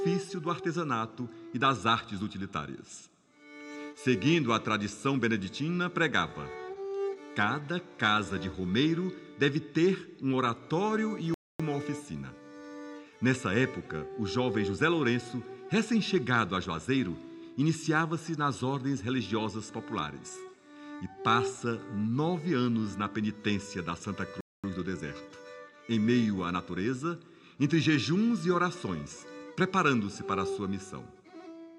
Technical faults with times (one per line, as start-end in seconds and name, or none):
11.34-11.60 playback stall
24.41-24.64 playback stall